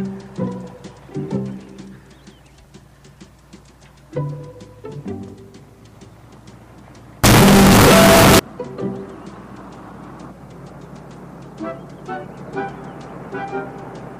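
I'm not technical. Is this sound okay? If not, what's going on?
No. From 7.24 to 8.39 s the audio was likely a float read as integer, so it turns into a sudden, very loud, harsh buzz with the quiet background blasting.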